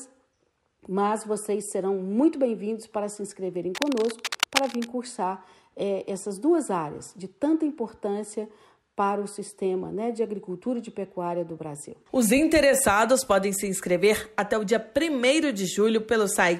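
From 3.75 to 4.90 s, cable scratch noise rustles over the sound at about 5 dB below it, likely from a worn cable or connector being moved so its contact resistance jumps. A spectrogram shows ragged broadband streaks, and the waveform thickens unevenly.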